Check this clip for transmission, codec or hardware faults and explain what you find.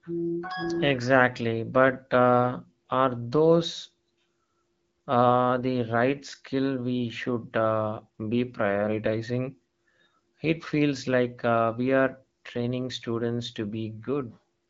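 Nothing here counts as a fault: the speech arrives over an AMR wideband (HD Voice) link at 12.65 kbit/s, with the light coding texture that rate leaves behind and nothing above about 7.5 kHz, which is just the band this codec carries.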